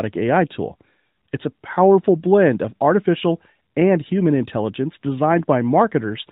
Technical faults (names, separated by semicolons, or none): none